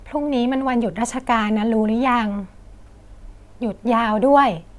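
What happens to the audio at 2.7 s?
Nothing goes wrong at 2.7 s; the speech carries on intact through that moment with no dropout, click or other audible fault.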